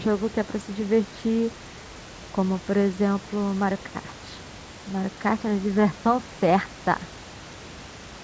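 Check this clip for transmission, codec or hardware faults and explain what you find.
No transmission, codec or hardware faults can be heard in this speech clip. The call path's band limit is present, with nothing above about 8 kHz, which fits a G.722 wideband codec, and room noise sits about 22 dB below the speech.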